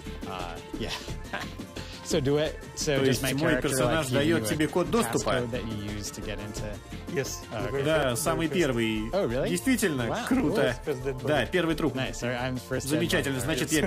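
Clock drift buffer slips run from 0.91 s to 12.78 s as a regular click about every 2.37 s. The steady spacing is likely caused by two devices on separate clocks disagreeing by a few hundred parts per million. The buffer between them slowly drifts until a few dozen samples are dropped or repeated, and each slip breaks the waveform audibly.

The adaptive stream at a lower bitrate starts at 3.46 s and ends at 5.46 s. Codec artefacts rise suddenly, then the quality recovers, with no gap at either edge. This points to the player switching from roughly 96 kbit/s AAC to a 32 kbit/s version while the connection slowed.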